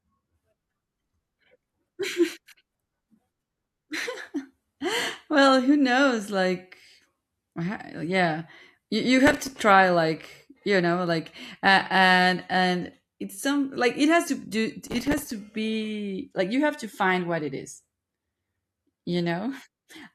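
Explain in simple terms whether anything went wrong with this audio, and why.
Something did go wrong, twice. There is processor overload crackle from 9.27 to 9.55 s, right after "yeah you you" and before "try like you know". It happens again from 14.87 to 15.32 s. The computer was too busy to deliver each tiny slice of sound on time. The slices were only a few milliseconds long, and dozens were late in a row. Each late slice was filled with old audio, so the speech turns gritty and crackly until the load eases.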